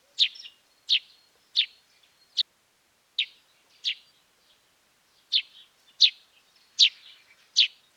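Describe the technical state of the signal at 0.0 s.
The signal is intact at 0.0 s, with no technical fault present at that moment.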